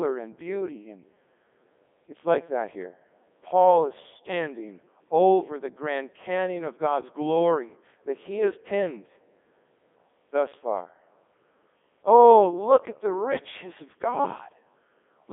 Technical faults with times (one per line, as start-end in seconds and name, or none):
0.00-15.33 Codec 2 vocoder